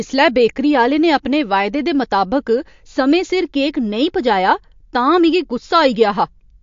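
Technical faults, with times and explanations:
Throughout, MP3 compression. Nothing is heard above 7.2 kHz, so the speech sounds dull, and the coding damage is plainly audible. The likely cause is an MP3 encoder short of bits, cutting the treble and dropping weak frequency lines, which fits about 51 kbps.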